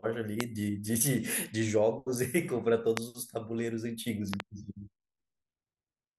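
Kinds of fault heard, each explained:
Loud pop: A sudden voltage step or spike entering the signal chain, likely from a plug, switch, static discharge or driver glitch, is shaped by the circuitry after it into a brief pulse that jumps far above the speech. Single sharp pops land at 0.41 s and 2.97 s, and a quick double pop spans 4.34 to 4.42 s. They peak roughly 20 to 25 dB above the speech, which carries on unbroken beneath them.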